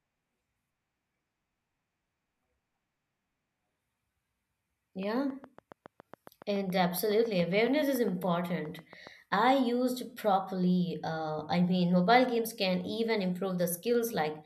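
From 5.03 to 9.08 s a train of clicks runs through the speech: some thirty near-identical pulses at a steady 7.2 per second, about as loud as the speech and clear in pauses, likely from interference or a faulty connection or power supply. Unlike random crackle, they tick evenly.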